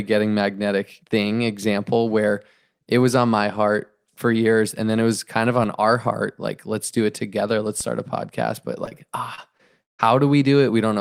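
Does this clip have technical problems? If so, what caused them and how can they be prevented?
Yes. The DC step comes at 7.81 s, just before "start a podcast". The waveform's zero line jumps abruptly, which is heard as a low thump while the speech carries on unchanged. The offset then bleeds away, decaying as if through a 5 Hz high-pass. An input with a standing offset being switched in, or a converter recalibrating, produces exactly this kind of jump. To prevent it, fix the offset at the source or keep a DC-blocking high-pass active before any input switching.

Short concealed packet loss hits four times: 8.85–8.89 s, 8.89–8.93 s, 9.35–9.39 s and 9.57–9.61 s. Each time about 20 ms of audio failed to reach the decoder in time. The receiver patched each hole by extending the preceding sound and then blending back into the real signal, so each one is heard as a brief smear or wobble, and the first two run back to back. 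Better jitter buffering and forward error correction on an unstable link would prevent these.

The long network dropout runs from 9.83 to 10.01 s. About 160 ms of audio is missing. The receiver first continues the last sound as a fading buzz or hiss, and then comes close to silence until the speech resumes later, with the lost part gone for good. The likely cause is a stall in the network connection rather than anything at the microphone. A more stable connection, such as wired instead of congested wireless, and adaptive buffering would reduce such gaps.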